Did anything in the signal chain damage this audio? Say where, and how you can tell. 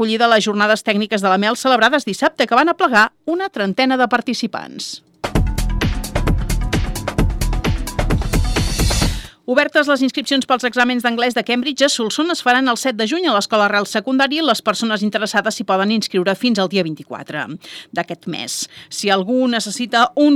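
No, nothing in the chain audibly damaged this audio.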